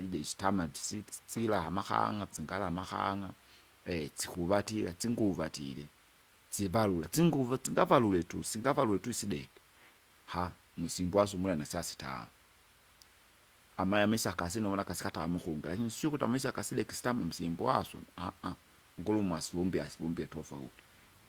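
From 4.35 to 5.47 s a short train of clicks ticks over the speech: about four sharp pops of much the same shape, arriving at an uneven pace of roughly 2.7 per second and standing out about 5 dB above the speech itself. The pulses are foreign to the recording rather than part of the sound, and their repeated, similar shape likely points to electrical interference from nearby equipment or a faulty connection or power supply.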